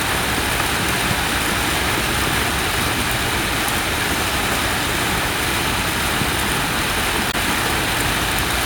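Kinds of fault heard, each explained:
Damaged data in a compressed stream: corrupted bytes make the decoder misread frames and hunt for the next header, causing a brief disruption from 7.28 to 7.35 s.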